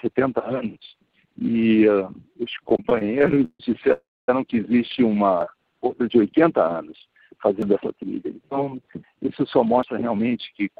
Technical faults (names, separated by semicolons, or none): repeated stalls (stutter); call audio freeze; jitter buffer speed-up